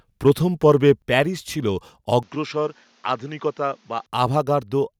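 Microphone overload affects this speech recording at 0.26–0.30 s, just before "পর্বে প্যারিস ছিল", and again at 0.88–0.91 s, just before "প্যারিস ছিল". The loudest peaks, about 2 dB and 1 dB past the converter's limit, have their tops flattened, most likely from input gain set too high for the converter, adding a brief harsh crackle. A microphone volume step-down follows at 1.02 s, right before "প্যারিস ছিল": the whole signal drops about 5 dB at once, likely the call software cutting the device's input gain in one step after those clipped peaks. An input switch to a poorer device runs from 2.23 s to 4.06 s, with no gap at the changeover. The sound turns duller because the poorer device passes a narrower band. The level falls by about 5 dB, and a faint new noise floor appears well below the speech. This likely reflects the system moving to another microphone or a headset call profile, then switching back.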